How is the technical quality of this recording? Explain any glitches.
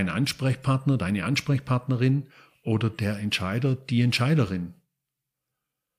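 The recording's technical quality is sound, with no glitches to explain.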